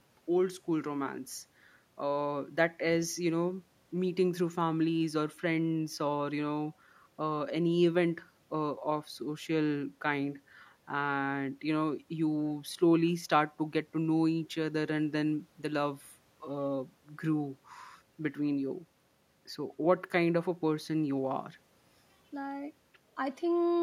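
No technical faults are audible anywhere in this speech recording.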